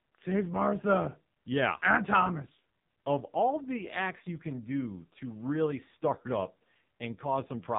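From start to finish the speech sounds buzzy, thin and synthetic, with nothing above 3.8 kHz. This is heavy AMR narrowband mobile codec damage. The vocal-tract model and sparse pulses are starved of bits, which fits AMR-NB at around 5.9 kbps.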